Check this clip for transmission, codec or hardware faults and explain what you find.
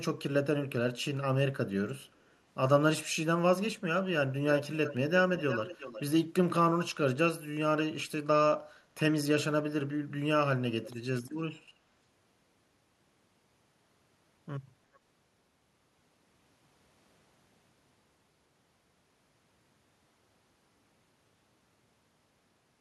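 There is one kind of fault: echo leak, heard four times. On one side of the call, loudspeaker sound picked up by the microphone likely got past the echo canceller and was sent back. The result is a copy of the speech returning about 350 to 390 ms late, at 4.84–4.96 s, 5.37–6.01 s (the loudest, about 10 dB below the speech), 10.84–10.93 s and 14.94–14.99 s (barely audible).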